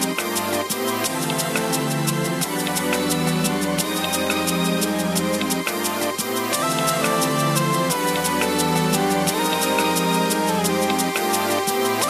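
Nothing in this one catches the ear as a technical problem, so there's no fault to point to anywhere in the audio.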